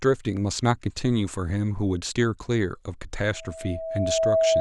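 Speech clip with loudspeaker feedback squeal from 3.33 s to the end: a 650 Hz tone swells over roughly a second to about 5 dB above the speech, as the mic re-amplifies its own loudspeaker.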